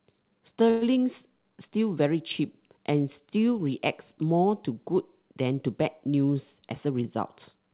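At 0.70 s the speech stops moving forward for a moment. This is a call audio freeze. The likely cause is delayed packets leaving the jitter buffer empty. The receiver fills the wait by stretching the last sound into a brief, fading buzz or hiss. It lasts until 0.83 s, about 114 ms. No real silence appears. When the packets arrive, the speech resumes where it stopped. Nothing seems lost. The talk simply arrives 114 ms later from then on.

From 6.55 s to the end, the speech runs fast. This is a jitter buffer speed-up. The buffer is holding more audio than it wants. To shrink the delay, the receiver cuts tiny pitch-period pieces out, again and again. Speed rises to about 108 percent. Pitch stays the same, so it sounds hurried rather than higher. Around a tenth of a second is trimmed in all. The whole clip also stops at 4 kHz, which fits a narrowband G.711-style call codec.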